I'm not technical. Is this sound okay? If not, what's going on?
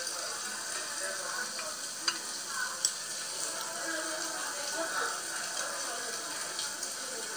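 Yes, this sound is okay, and nothing is going wrong in it.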